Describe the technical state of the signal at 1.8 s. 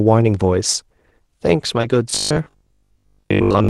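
Short concealed packet loss occurs from 1.81 to 1.85 s: about 20 ms of the speech arrived too late to decode, so the receiver extended the preceding sound to fill the gap and blended back into the real signal, leaving a brief smear or wobble, within a call path whose codec appears to limit the top end near 12 kHz.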